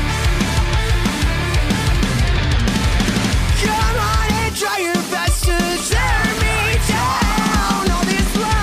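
From 5.05 s to 8.47 s, a train of clicks sits over the sound. The pulses arrive at a steady pace, about 5.3 per second. Roughly twenty of them occur before they stop. Each click has much the same sharp shape. They peak a little above the level of the sound itself, so they stand out clearly as a regular ticking. The likely cause is interference from nearby equipment or a faulty connection or power supply injecting pulses.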